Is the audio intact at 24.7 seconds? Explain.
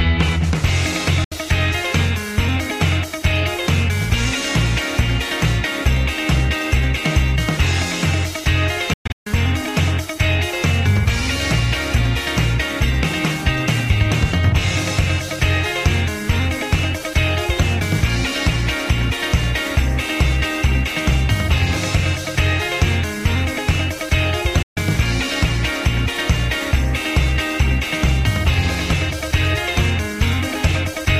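No: a Bluetooth dropout silences the audio from 24.62 to 24.77 s, likely because packets reached the headphones late and were discarded; the sound then resumes further along.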